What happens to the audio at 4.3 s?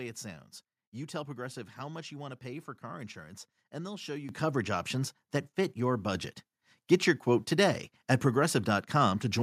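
At 4.29 s the microphone volume steps up. It falls between "and they'll show you" and "coverage options that fit." The call software judged the microphone too quiet and raised the device's input volume in a single step. The level jumps by about 10 dB at once. The voice and the background noise get louder together. The change is abrupt, not a gradual fade.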